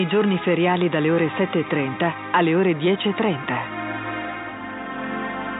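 Nothing in the audio stood out as a problem on listening.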